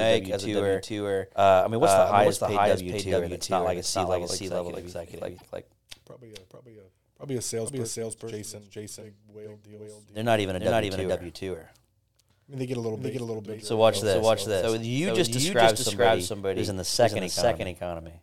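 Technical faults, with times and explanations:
Throughout, doubled audio track: a second full-band copy trails about 0.4 s behind at roughly equal level, dry and uncoloured. A second, slower capture path is the likely cause.
5.34–5.43 s, damaged data in a compressed stream: just after "think like", a short glitch cuts in. The decoder misread corrupted frames and lost sync.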